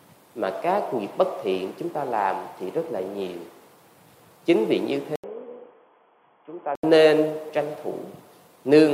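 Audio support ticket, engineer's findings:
Input likely switched to a poorer device, 5.16–6.83 s: 80 ms gap at switch, nothing above 3.4 kHz, level down about 5 dB, sound dull and boxy.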